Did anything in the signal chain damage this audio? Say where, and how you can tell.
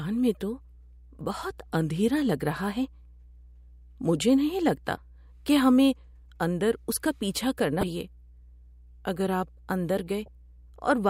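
Yes. Mains hum runs through the whole recording, so the damage is in the analogue wiring. A steady low tone sits under the speech at 60 Hz, roughly 25 dB below it. It never changes with the talker and stays in the pauses. That points to a ground loop or a nearby transformer. Power-line current leaks into the signal path before conversion. The hum gets recorded along with the speech.

There is also damaged data in a compressed stream, which is a codec or storage fault. Three short glitches interrupt the speech, at 4.95 to 4.98 s, 7.80 to 7.83 s and 10.25 to 10.28 s. Each lasts about 30 ms. At those points bytes in the compressed file were corrupted. The decoder misreads the bad frames and loses sync. It then hunts for the next valid frame header, producing a brief glitch.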